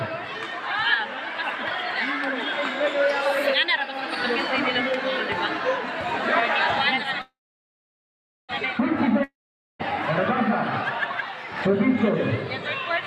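From 7.21 to 8.51 s there is a call audio freeze: packets were likely held up in transit, so the jitter buffer ran dry. The last sound trails off into a brief fading buzz and then roughly a second of silence, after which the audio resumes exactly where it stopped, now running about 1.3 s late.

From 9.24 to 9.81 s comes a long network dropout, likely a stretch where no packets got through at all. A short fading tail gives way to about half a second of silence, and the audio returns further along, with roughly 0.56 s of it gone for good.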